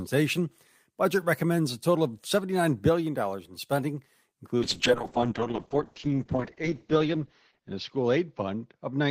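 At 4.59 s a call bitrate drop sets in and lasts to the end of the clip. The encoder is starved of bits, so the speech turns coarse and watery, with a harsher patch of about 2.3 s at the worst point, which fits a fall from roughly 32 kbps to around 7 kbps. On a spectrogram, energy that reached 20 kHz is sliced off flat at 8 kHz, and the remaining bands look smeared and blotchy.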